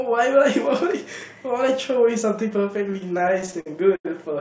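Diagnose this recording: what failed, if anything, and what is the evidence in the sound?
Repeated stalls (stutter) at the network and jitter-buffer stage, from 2.88 to 4.07 s: thirteen brief hangs, longest 88 ms, about 246 ms of filled sound in all. Late packets drained the buffer, and the receiver stretched the last sound until data resumed. Nothing is lost, only dragged, over audio band-limited at 8 kHz, consistent with a wideband codec such as G.722.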